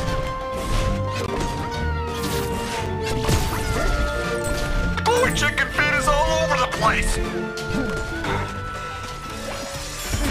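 At 1.26 s there's a block of digital silence, about 20 ms where the sound drops to silence, then a shorter one near 5 ms at 2.86 s. The sound cuts out and back with no fade; the first is heard as a short hole and the second as a quick tick.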